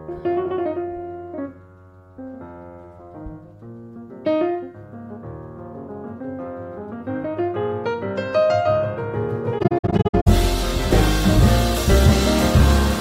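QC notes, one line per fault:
9.58–10.28 s AAC frame loss with muting: scattered faded silences totalling 384 ms, longest around 70 ms; overlapping windows fade each hole, unlike hard dropouts.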